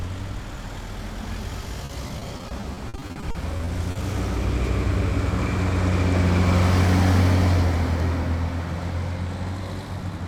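From 1.85 to 3.97 s there's repeated packet loss: lots of short dropouts, up to 50 ms each, patched by stretching the last sound, so it turns choppy and robotic.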